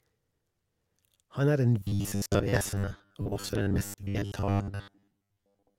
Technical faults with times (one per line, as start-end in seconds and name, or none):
1.80-5.79 robotic sound from repeated short buffers